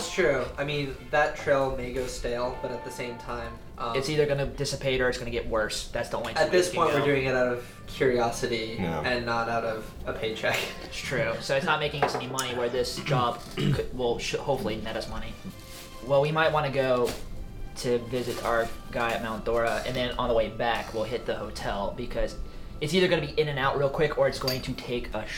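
Nothing stood out on listening to this clip.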